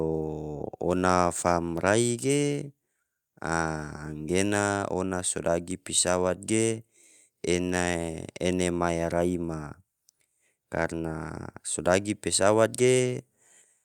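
No technical faults can be heard anywhere in the recording.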